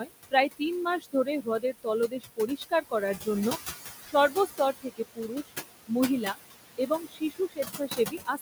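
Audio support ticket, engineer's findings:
Noise suppressor artifacts, whole clip. Suppressor pulls steady-noise bands down by about 17 dB frame by frame, so the background drops between words and swells back under them. The room noise, sitting only about 9 dB below the speech, is what gets pumped. Component: noise suppression stage, gating too aggressively for this noise level.

Speech cut by the noise suppressor at 1.0–1.87 s, 2.08–2.93 s, 4.04–4.14 s, 4.3–5.53 s, 6.21–6.37 s and 6.78 s to the end. Suppressor misclassifies soft speech as noise and attenuates it with the background, about 15–20 dB at worst. Most affected stretches are only a fraction of their span. Consonants, endings and quiet phrases sound swallowed or faint. Component: suppressor speech/noise decision.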